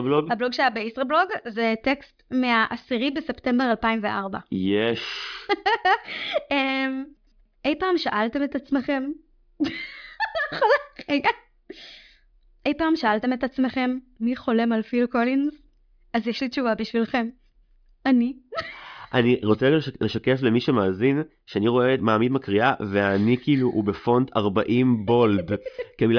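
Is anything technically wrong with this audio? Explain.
No, nothing is technically wrong with this audio.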